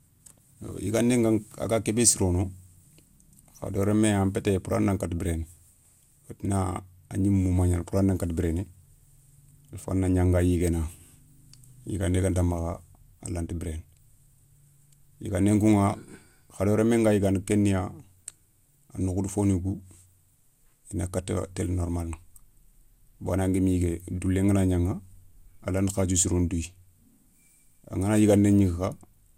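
From start to finish the speech carries a swirly, hollow smear, with consonant attacks blurred and nothing above about 17.3 kHz. This is most likely generation loss: the audio seems to have been re-encoded around ten times, each pass quantising on a shifted frame grid so the noise accumulates. What separates it from a single low-bitrate encode is that the damage is worse than the bitrate implies, consistent with repeated passes through an MP2-style codec at about 128 kbit/s.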